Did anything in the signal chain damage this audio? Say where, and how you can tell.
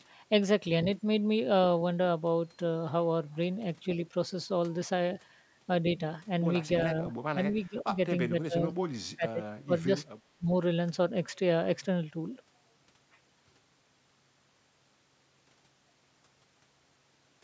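Yes. The call processing stage shows speech suppressed in double talk, likely from the echo canceller ducking the near talker. The speech dips or breaks into fragments at 6.83–7.12, 7.33–7.39, 7.67–7.97, 8.29–8.65, 9.16–9.40, 9.65–9.89, 10.12–10.18 and 10.38–10.50 s, by about 5 to 25 dB.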